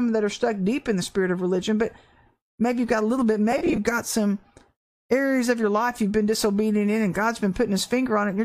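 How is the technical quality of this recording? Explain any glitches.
The recording has one glitch, between 3.52 and 3.78 s, where lost LE Audio frames break up the speech. About 120 ms of audio drops out, scattered in short gaps across roughly 260 ms, the longest around 30 ms. For each gap, the decoder reuses the last spectrum with random signs, so the speech briefly turns into a grainy, noisy smear. The light coding texture elsewhere is most likely LC3 Bluetooth compression.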